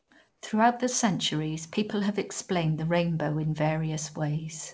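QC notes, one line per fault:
0.00–0.11 s and 0.29–0.41 s, comfort noise in place of the background: in both pauses the real room tone is replaced by a steady, featureless hiss, about 5 dB and then about 6 dB quieter than the surrounding background, which sits roughly 44 to 48 dB below the loudest sound. Likely discontinuous transmission, with the receiver synthesising noise while the sender is silent. Unlike a noise gate, the gaps are filled with noise rather than dropping to silence. Across the clip, nothing above 8 kHz fits a G.722 call path.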